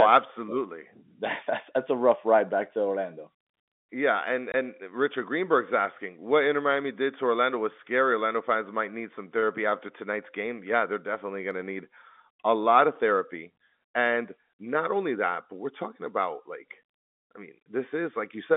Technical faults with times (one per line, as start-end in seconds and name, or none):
4.52-4.54 packet loss filled with silence